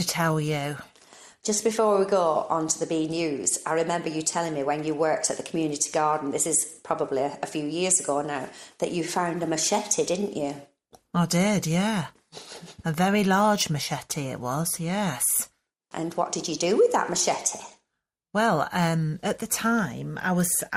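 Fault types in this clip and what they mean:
MP2 compression: Dull, gurgly and granular all the way through, with upper bands flickering out, which likely points to MPEG Layer II coding at around 80 kbps.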